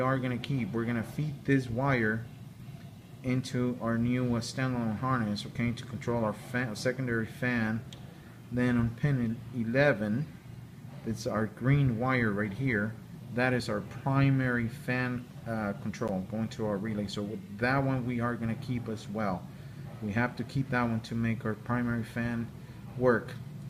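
At 16.08 s there's a block of digital silence, roughly 10.7 ms long, which fits a 512-sample buffer. The output got zeros instead of audio, either from a buffer not filled in time or from invalid numbers. Being that short, it comes across as a tick or dip, not a gap.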